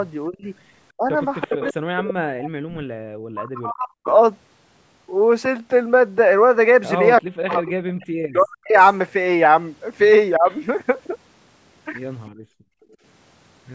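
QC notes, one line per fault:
0.27–4.06 s, 7.21–8.76 s and 10.38–10.48 s: speech suppressed in double talk. The voice dips by up to about 40 dB in the first two spans and about 15 dB in the last. The likely cause is an echo canceller that could not separate the talker from loudspeaker echo during overlap, so it turned both down.
1.41–4.14 s, 7.18–8.88 s, 10.5–10.56 s and 12.26–12.96 s: echo leak. A copy of the voice returns 335 ms late. It is about 10 dB below the speech at first, then about 15 dB, and only a faint trace at the end. The likely cause is a speakerphone whose canceller failed to remove part of its own playback picked up by the microphone.
12.31–12.98 s: background gated by the echo canceller. The room sound drops by about 37 dB for roughly 0.7 s, then comes back. The canceller clamped the microphone hard while the loudspeaker played and released it once playback stopped.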